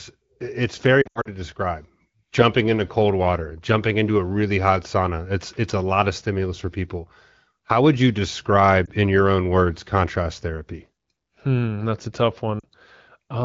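Speech with brief dropouts: between 1.02 and 1.28 s the sound warbles and smears in several short gaps, the longest about 80 ms, where it drops to near silence before returning weak. A single brief dip comes at 8.86 s, and a slightly longer one, about 40 ms, at 12.60 s. These are lost AMR speech frames. Corrupted frames were discarded, and the decoder filled the gaps by repeating the last good pitch and vocal-tract settings at falling gain. The light wideband AMR-WB (HD Voice) coding underneath fits a rate near 16 kbit/s.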